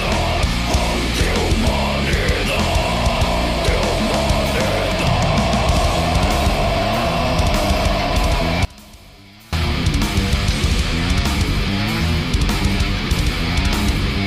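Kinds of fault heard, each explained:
One channel inverted: between 8.65 and 9.53 s the sound drops about 24 dB, likely one channel's reversed polarity cancelling in the mono sum.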